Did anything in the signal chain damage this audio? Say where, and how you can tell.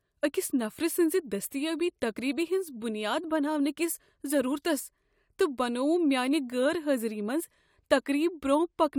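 No, nothing in the signal chain audibly damaged it.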